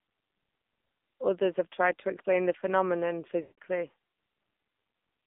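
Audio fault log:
Throughout: AMR narrowband mobile codec. The speech sounds thin, buzzy and synthetic, with nothing above about 3.6 kHz or below 200 Hz, and the codec damage is plainly audible. The low bitrate, which fits AMR-NB's 7.4 kbps mode, leaves only a coarse vocal-tract model driven by sparse pulses.
3.42–3.58 s: lost AMR speech frames. Right after "to explain the phenomenon" the sound smears into a drawn-out, fading tone for 0.16 s, then returns weak and rough. The decoder likely reused the last good pitch and vocal-tract settings at falling gain across a run of failed frames.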